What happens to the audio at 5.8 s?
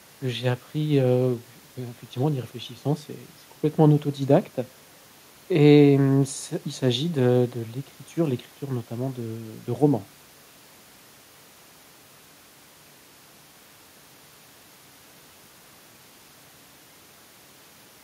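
Nothing goes wrong at 5.8 s; the speech carries straight through that moment with no dropout, click, distortion or other fault.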